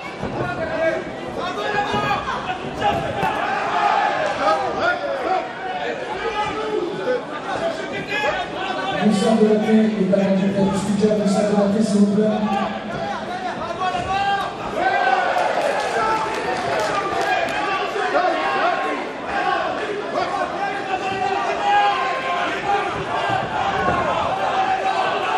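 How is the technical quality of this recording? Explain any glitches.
No glitches to report: nothing in the recording stands out as a technical fault.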